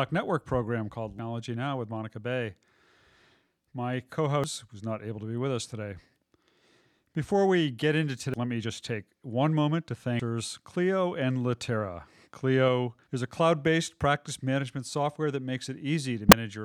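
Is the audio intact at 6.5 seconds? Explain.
Yes, the audio at 6.5 seconds is intact, with no fault present at that point in the speech.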